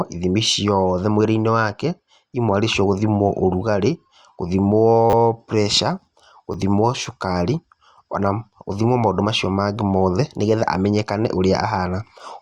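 Speech, with two repeated buffer faults. From 5.10 to 5.13 s, one tiny slice plays four times in a row, giving a brief buzz. At 6.53 s, a slice plays twice, heard as a click. Fresh audio arrived late, so the last block replayed, which fits a 10 ms buffer.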